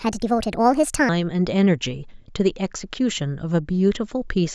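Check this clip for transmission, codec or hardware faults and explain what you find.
One fault is present, a wrong sample rate, from 0.0 to 1.09 s at the start of the speech. The samples are clocked out faster than they were captured, with no rate conversion. Speed and pitch therefore rise together. Playback runs 1.38 times too fast, and pitch climbs by about 5.5 semitones. That ratio fits 16 kHz audio played at 22 kHz. The voice sounds high, thin and hurried until the rate corrects.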